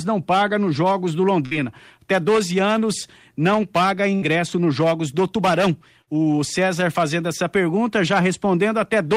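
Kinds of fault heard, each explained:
Burst of packet loss: three times, 60 ms of speech is lost and bridged by a fading continuation of the preceding sound, not the abrupt silence of a dropout.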